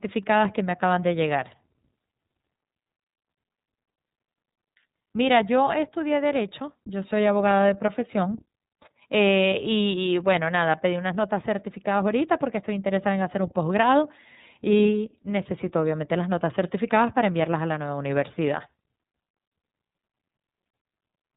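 iLBC codec coding runs through the whole clip, from start to finish. The codec encodes the excitation of each frame independently, and the result fits its 30 ms frame mode at 13.33 kbps. Nothing above 3.8 kHz survives, so the speech sounds narrowband and muffled, lacking crisp sibilants. The coding damage is plainly audible as a rough, slightly synthetic texture in the speech.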